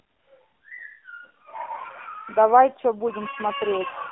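AMR narrowband mobile codec, throughout: the speech has passed through the AMR-NB mobile speech codec, and the band runs only from about 250 Hz to 3.6 kHz. The voice model is starved of bits, which fits the 7.4 kbps mode, so the voice sounds plainly buzzy and synthetic.

AMR bit errors, from 1.30 to 1.44 s: a burst of corrupted frames, with roughly a few percent of bits flipped, knocks the excitation pulses and fine pitch, gain and spectral values out of place. For that stretch the voice holds its pitch and level but turns hoarse, scratchy and gargly.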